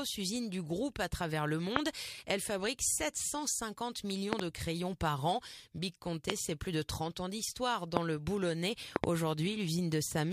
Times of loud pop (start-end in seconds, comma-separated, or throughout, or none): 1.76-1.78, 4.33-4.41, 6.30-6.32, 7.97-7.99, 8.96-9.06